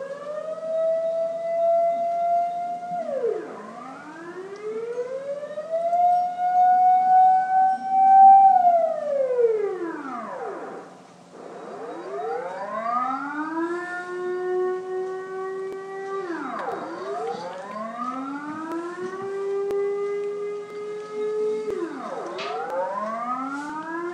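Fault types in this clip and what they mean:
Periodic USB or driver dropouts: From 15.73 to 23.70 s, regular small ticks sound about once per second (period 0.999 s), around ten in all, each where roughly a millisecond of audio is skipped as a background task briefly stalls the USB bus or audio driver.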